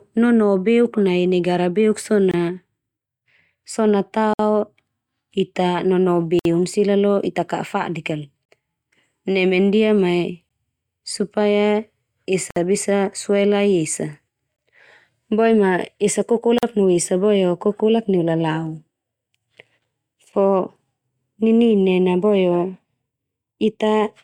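Speech clip with a gap between stream segments roughly every 2 seconds: hard-edged silent holes of about 16 to 59 ms at 2.31, 4.34, 6.39, 8.45, 10.49, 12.51, 14.56 and 16.58 s, where segment timestamps don't quite line up.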